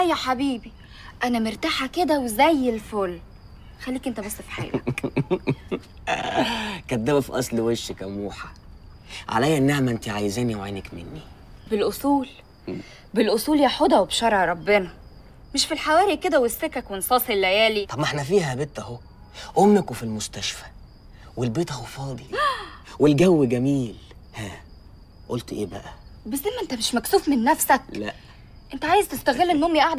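No audible technical faults are present anywhere in the recording.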